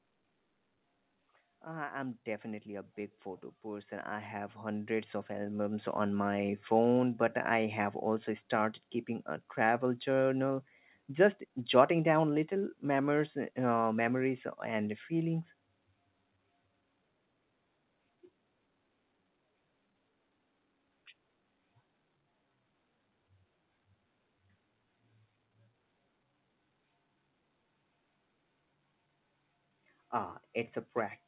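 Automatic gain rising from 1.6 to 6.28 s in this speech recording: the gain control judged the input too quiet and lifted it by about 15 dB, so voice and background swell together. The call path's band limit is audible too, with nothing above 4 kHz, which fits a narrowband codec such as G.711.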